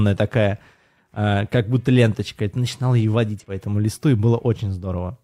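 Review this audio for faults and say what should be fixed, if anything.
At 3.35 to 3.45 s in this speech, between "и ты начинал ее" and "по этому листу и", compressed frames are skipped. Damaged or missing frames never reach the output, so the audio jumps ahead by about 50 ms. Unlike a dropout, there is no silent gap; the audio simply resumes slightly later. To prevent this, verify file integrity and re-encode or re-transfer from an undamaged source.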